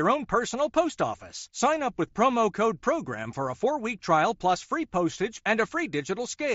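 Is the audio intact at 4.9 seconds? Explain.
Yes, the speech at 4.9 seconds is intact, with no fault at that moment beyond the ordinary sound of the Bluetooth mSBC headset codec it passes through.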